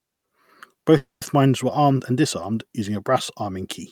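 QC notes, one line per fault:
0.97–1.24 s, call audio freeze: the speech stalls for about 240 ms as its last sound stretches into a fading fill and then 160 ms of silence, before "mines were armed and" resumes intact and 240 ms late, likely from delayed packets draining the jitter buffer.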